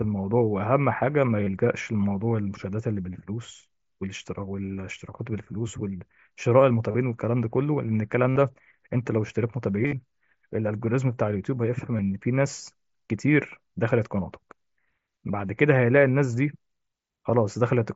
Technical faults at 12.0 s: concealed Bluetooth headset packet loss

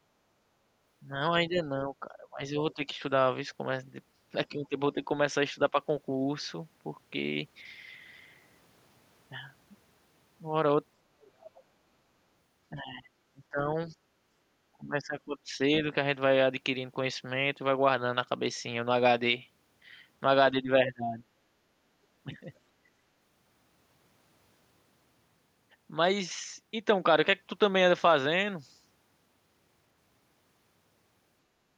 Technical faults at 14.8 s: speech suppressed in double talk

